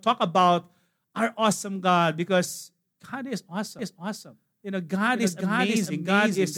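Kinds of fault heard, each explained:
doubled audio track: From 3.79 s to the end, the speech is heard twice. A full-band copy trails about half a second behind, at roughly the same level. It cuts in abruptly, with no decay or room colour. A slower second capture path is the likely cause.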